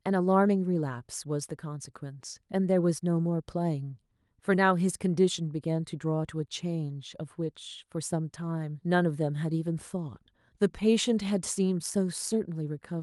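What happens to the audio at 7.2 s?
Nothing goes wrong at 7.2 s: the speech there is intact, carried through the Opus call path without any fault.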